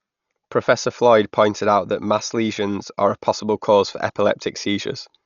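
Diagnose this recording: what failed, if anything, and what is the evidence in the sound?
Codec stage, likely low-bitrate Dolby Digital compression: the speech is dull throughout, with nothing above 7 kHz, and bit-starved bands are filled with rough, fluttering dither noise, which fits about 48 kbps.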